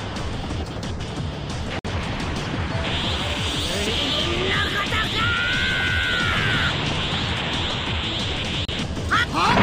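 A likely Bluetooth stall, where packets held up by interference let the headphones' buffer run dry, interrupts playback twice. At 1.79 s the sound drops to dead silence for about 56 ms and resumes at 1.86 s; at 8.65 s it cuts out again, this time for about 33 ms, returning at 8.69 s. Each gap is an abrupt hole rather than a fade, with the audio simply halting and restarting once the delayed data arrives.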